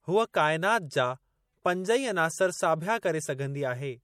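Speech carrying plainly audible MP3 compression damage throughout, with watery, swirly artefacts and nothing above 19.7 kHz, likely from MP3 encoding at a rate that fits 64 kbps.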